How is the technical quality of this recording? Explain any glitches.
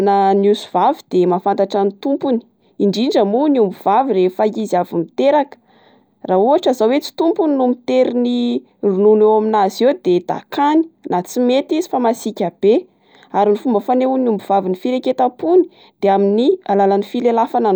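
No technical faults heard anywhere in the speech recording; the signal holds steady throughout.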